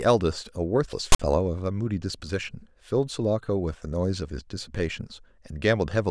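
At 1.12 s the speech is interrupted for about 70 ms by file tags played as audio: a block of tag text is decoded as samples, giving a harsh, one-sided rasp, then dead silence from the zero padding. The hard edges and flat silent tail set it apart from a dropout or codec glitch.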